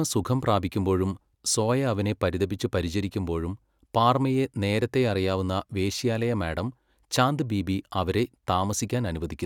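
No technical faults can be heard anywhere in the speech recording.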